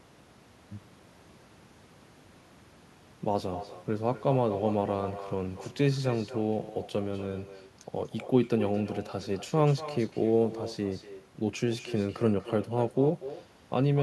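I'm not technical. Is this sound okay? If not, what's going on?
No, not quite. From start to finish there's an echo with no canceller: every bit of speech gets repeated about a fifth of a second later by a quieter, thinner copy of itself. What's happening is the person on the other end has the call on a loudspeaker, their microphone hears it, and nothing on their side strips that out, so it travels back across the line to you.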